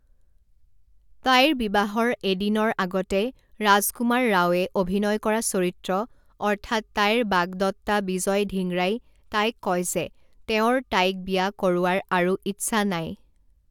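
No audible technical faults.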